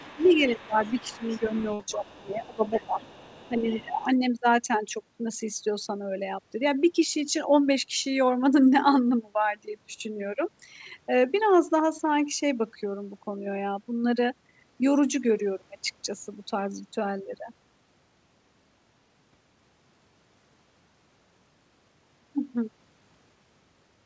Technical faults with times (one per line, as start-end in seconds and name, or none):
0.00-1.52 speech suppressed in double talk
0.04-3.62 other side's voice leaking through
1.74-1.81 burst of packet loss
1.91-3.06 speech suppressed in double talk
3.49-4.07 speech suppressed in double talk
4.00-4.04 other side's voice leaking through